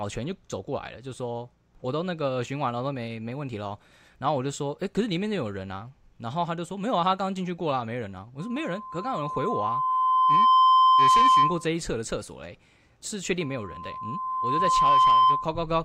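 Loudspeaker feedback squeal appears from 8.39 to 11.69 s and again from 13.41 to 15.60 s: a 1 kHz tone swells over a second or two as the mic-to-speaker loop runs away, peaking well above the speech. On a spectrogram it's a bright horizontal line; the waveform envelope ramps up.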